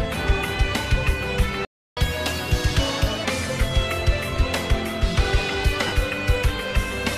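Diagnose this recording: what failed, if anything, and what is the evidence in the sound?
Playback stage: a playback stall cuts the sound dead at 1.65 s and leaves silence until 1.97 s, about 320 ms. Output resumes mid-flow rather than fading, so the player's buffer likely ran dry or its audio thread was blocked.

Playback stage again: catch-up at higher speed follows directly, from 1.97 to 3.25 s. The player resamples its backlog at 1.25x, so tempo rises and pitch lifts by roughly four semitones, then both return to normal.

Wireless link and codec stage: lost LE Audio frames appear as a brief noisy smear at 4.35 s, about 7.5 ms, one frame's worth. A longer dropout from 5.87 to 5.93 s, 52.5 ms, fits seven consecutive frames. The LC3 decoder repeats the last spectrum with randomised signs, giving a noisy wash that fades before normal sound returns.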